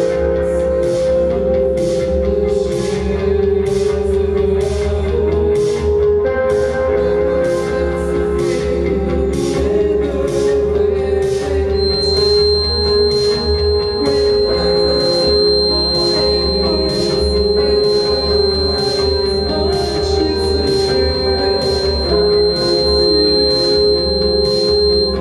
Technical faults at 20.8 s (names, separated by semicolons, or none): feedback whistle